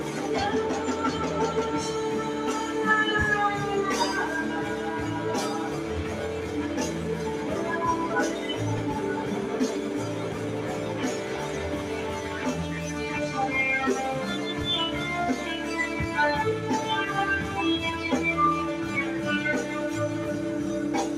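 A speech-style noise suppressor has been left running over the whole clip, and it's treating the sustained, steady parts of the sound as if they were background hiss. Sharp onsets mostly punch through, but anything that holds or decays gets pulled down by roughly 5 dB, then released again, so you hear pumping and fluttering across all 21 seconds, with tails and ambience thinning out instead of ringing naturally.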